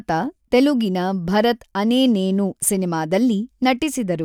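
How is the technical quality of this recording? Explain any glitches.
Nothing here calls for an explanation; I can't hear any glitches anywhere in this speech recording.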